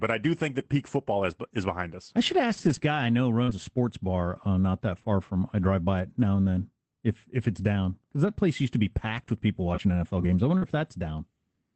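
Just after "I do think", at 0.59 s, and before "peak football is is", a 20 ms lost packet rebuilt from error correction leaves no gap. The frame is played from a low-bitrate copy, so it sounds briefly rougher and noisier. A longer rebuilt stretch of 120 ms runs from 2.57 to 2.79 s, and single 20 ms rebuilds follow at 3.47, 8.25 and 10.62 s.

From 3.43 to 3.49 s, after "guy I know" and before "a sports bar uh", comes short concealed packet loss. About 40 ms never arrived. The decoder extends the last sound instead, so it comes out as a smear or wobble rather than grainy coding. The same happens from 10.57 to 10.64 s after "games I". Both end in a rebuilt frame.

The Opus call path tops out at 8 kHz.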